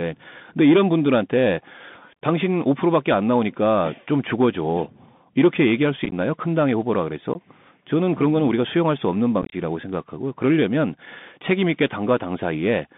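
Throughout, the speech carries the Bluetooth CVSD headset codec's sound: a band of about 150 Hz to 3.6 kHz, scratchy sibilants and granular hiss, visible as a hard spectrogram ceiling.

Unconcealed Bluetooth headset packet loss, where dropped voice packets become silence, punches abrupt gaps with vertical waveform edges. At 6.05 to 6.13 s, 37.5 ms is lost in bursts up to 15 ms. At 7.34 s, 15 ms is lost. At 9.42 to 9.55 s, 75 ms is lost in bursts up to 22.5 ms.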